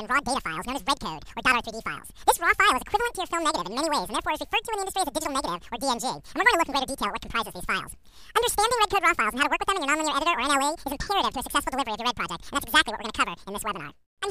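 From start to finish the sound runs at double speed and sits an octave high. This is audio read two samples at a time: each pair is taken as one frame, so playback runs at twice the intended rate and high frequencies fold back.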